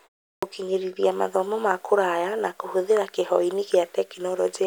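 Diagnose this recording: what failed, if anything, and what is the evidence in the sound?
The playback device shows a clipped start after a pause. After 0.36 s of silence, speech resumes abruptly at 0.36 to 0.43 s, losing about 65 ms of its onset while the sleeping output wakes. On a waveform, the envelope jumps abruptly out of silence, and the spectrogram lacks the energy of the first sounds.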